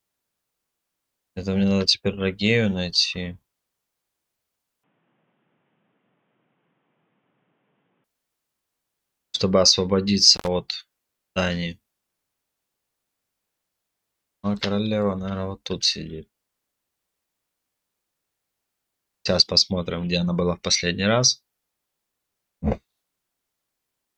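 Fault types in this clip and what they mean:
Input switched to a poorer device: from 4.84 to 8.04 s the sound turns dull and boxy, with nothing above 3.8 kHz, about 10 dB quieter and with a new noise floor. It likely comes from another microphone, not a filter, because tone, level and noise all change together.
Intermittent contact: at 10.34 to 10.48 s the signal opens for about 80 ms, with crackle at the break and faint hiss underneath. That scratchy edge points to a loose plug or cable, not a network dropout, which would leave a clean silent gap.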